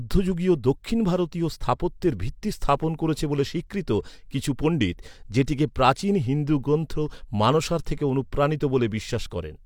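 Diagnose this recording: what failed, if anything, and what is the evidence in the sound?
Nothing failed; no faults audible.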